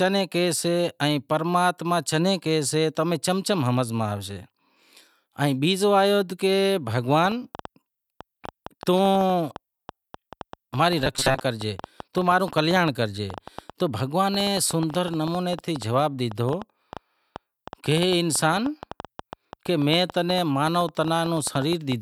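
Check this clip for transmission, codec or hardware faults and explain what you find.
Two faults are audible: a train of clicks across most of the clip, and a short robotic stretch inside it.

From 7.26 s to 21.93 s, a train of clicks ticks and pops over the speech and through the pauses, about 7.2 per second at an uneven pace, roughly a hundred in all. Each click is a similar sharp pulse, peaking about 5 dB above the speech. The likely cause is electrical interference from nearby equipment or a faulty connection or power supply injecting the same brief spike again and again.

From 10.99 s to 11.40 s, the speech turns into robotic sound from repeated short buffers: a rigid, metallic buzz at 133 Hz that still roughly traces the syllables. That pitch fits a buffer of about 7.5 ms being replayed. New audio likely arrived too seldom, so the software looped the last fragment to fill the gap. 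About half of this stretch is repeated material, and the skipped speech is lost.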